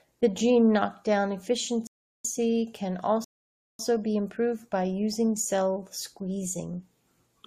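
The player twice ran out of downloaded data in this speech recording, causing a rebuffering stall each time. The speech drops to silence from 1.87 to 2.25 s after "gene knockdown" and from 3.24 to 3.79 s before "be improved by using", then resumes exactly where it stopped. Nothing is lost, but about 0.38 s and 0.55 s are added.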